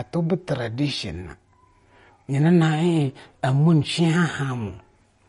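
Running from start to finish, the speech shows the marks of a low-bitrate encode, likely MP3 compression at a rate that fits roughly 39 kbps. Starved of bits, the encoder removed everything above 10.6 kHz and dropped weak detail, leaving a dull, plainly watery, swirling texture.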